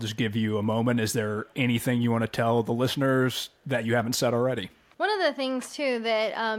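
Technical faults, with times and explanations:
1.46–1.54 s, echo leak: on the far end, an echo canceller likely failed to remove a little of what its loudspeaker fed back into its microphone. A very faint, brief scrap of the speech therefore returns about 450 ms late, sitting far below the talker.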